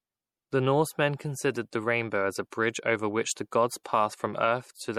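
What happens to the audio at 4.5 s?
At 4.5 s the speech carries swirly, watery MP3 compression artefacts, present throughout, likely from a low bitrate near 64 kbps. Weak frequency lines flicker frame to frame, which a plain low-pass cut at 19.2 kHz wouldn't do.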